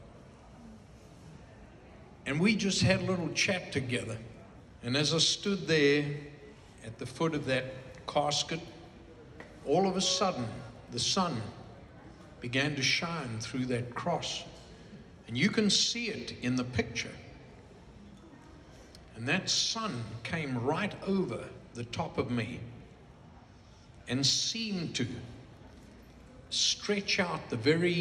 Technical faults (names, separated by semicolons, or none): clock slip clicks